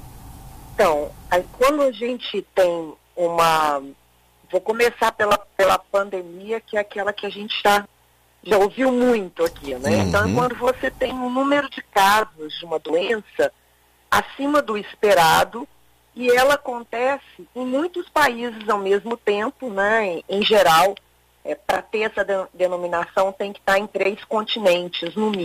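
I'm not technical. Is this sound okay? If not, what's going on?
No. Periodic clock jitter runs throughout: the converter's timing clock wobbles at about 1.5 kHz, giving sounds a rough, metallic edge, strongest on high tones.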